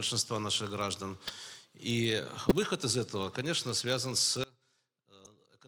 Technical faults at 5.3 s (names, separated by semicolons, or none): block size mismatch (padded); one channel inverted; corrupt frame decoded